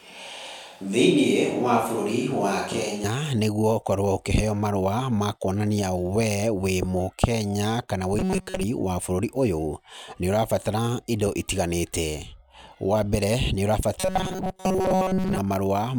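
A speech recording. From the start until 3.04 s, the sound is roomy and hollow, with thin bass and room noise about 30 dB below the speech. The level barely changes. This is likely a switch to a distant microphone, with the close microphone returning abruptly at 3.04 s. From 8.19 to 8.63 s, and again from 14.0 to 15.38 s, the speech turns into a rigid metallic buzz at 188 Hz. Most of the audio there seems replaced. The cause is likely robotic sound from repeated short buffers, each about 5.3 ms long.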